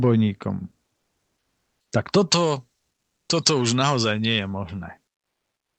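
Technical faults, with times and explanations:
0.97–1.91 s, comfort noise in place of the background: during this pause in speech, the real background, already about 58 dB below the loudest parts, gives way to a steady, featureless hiss about 9 dB quieter. Its detail vanishes for 0.94 s, then returns with the speech. The likely cause is Opus discontinuous transmission: the sender stopped sending in silence, and the receiver filled the gap with synthetic noise shaped like the background.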